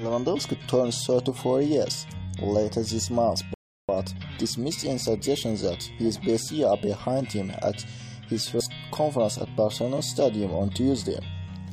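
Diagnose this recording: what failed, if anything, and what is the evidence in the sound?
Playback failed with a rebuffering stall. At 3.54 s the sound cuts to silence and resumes at 3.89 s, adding about 0.35 s to the running time. The player exhausted its downloaded audio and waited for more data before continuing. Unlike a dropout or packet loss, nothing is missing: the audio picks up exactly where it stopped, with no skipped material, concealment smearing, or jump in continuity, only a gap inserted into the timeline.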